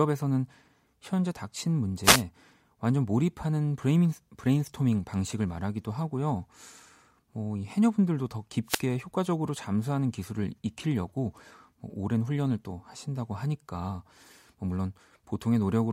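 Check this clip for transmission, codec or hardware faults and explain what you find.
Two wireless microphone noise hits break into the speech. They fall at 2.03 to 2.23 s and 8.66 to 8.82 s. Each time, the FM radio link fades as reflected signals cancel, so receiver noise briefly rises with a short swish of static.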